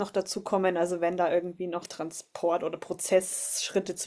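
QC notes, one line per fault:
No faults found on listening; the speech runs without interruption or audible defect.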